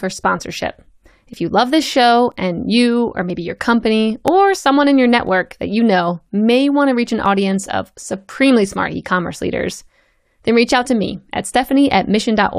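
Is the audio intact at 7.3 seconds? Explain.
No, there is a tiny skip at 7.26 s, where about 8 ms of speech vanishes and the waveform jumps. This is an overlap between stream segments: two adjacent segments' time stamps overlapped, so the player trimmed away audio that was never actually duplicated.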